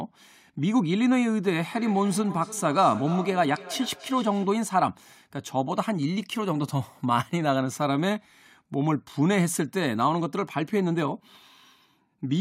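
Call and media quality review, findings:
Feedback echo between two devices, 1.72 to 4.69 s. Speech returns at a fixed interval of about a third of a second, each pass thinner and more ringing, peaking about 15 dB below the direct speech. Cause: a second device in the room plays the call back into a nearby microphone, and neither echo canceller removes the other's output.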